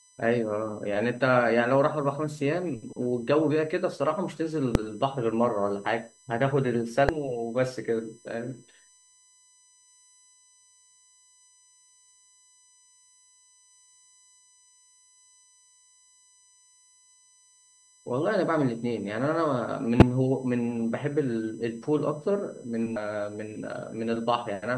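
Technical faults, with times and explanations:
Throughout: USB whine, a fixed tone at 1 kHz, strongest at 8 kHz, around 30 dB below the speech, from USB frame-rate current leaking through power or ground.
4.75, 7.09, 11.89, 20.00–20.02 and 22.96 s: damaged data in a compressed stream. Each is a brief chirp or blip where corrupted frames were misdecoded before the decoder resynchronised.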